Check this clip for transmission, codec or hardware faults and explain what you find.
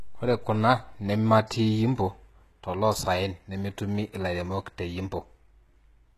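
A single codec fault runs through the whole speech clip: it is likely HE-AAC compression, with damage that is plainly audible. The codec codes only the lower spectrum and rebuilds the treble by copying lower bands upward under a coarse envelope, so the rebuilt harmonics fail to line up, and s sounds come out gritty, metallic or lispy. The grit points to a very low bitrate, around 16 kbps. A spectrogram shows nothing above 12.3 kHz, with repeated, blocky texture in the upper band.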